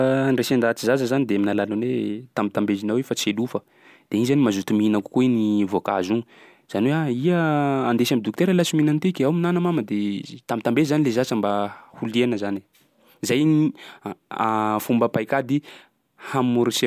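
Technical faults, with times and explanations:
No technical faults are audible in this speech.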